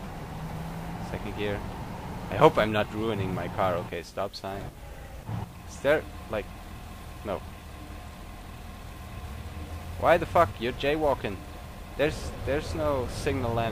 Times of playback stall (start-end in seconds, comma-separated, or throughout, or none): none